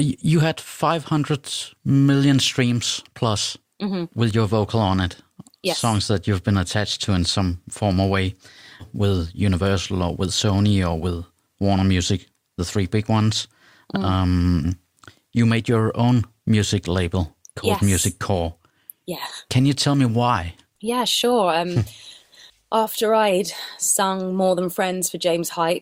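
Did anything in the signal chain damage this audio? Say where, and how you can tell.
Yes. At about 8.79 to 8.84 s the speech suddenly jumps ahead with a small blip. That abrupt discontinuity is likely a stream segment skipped at the network or playback stage: one chunk failed to load, so the player dropped it and carried on with the next.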